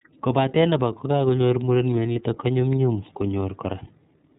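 From start to finish the speech carries plainly audible iLBC codec damage. Everything above 4 kHz is missing, so sibilants and breath sounds are dull and the voice has a boxed-in telephone quality. iLBC codes each frame's excitation on its own, and the result sounds slightly rough and synthetic. The frame pacing points to iLBC's 30 ms mode, which would put it at the 13.33 kbps setting.

Between 2.13 and 2.16 s there is a brief patch of lost iLBC frames. The gap is about 30 ms, which fits a single dropped 30 ms frame. The decoder covered it by repeating the last pitch cycle with noise mixed in, so the moment sounds like a short, faintly buzzy held vowel. Because the next frame decodes independently, the speech snaps back to its normal character right after.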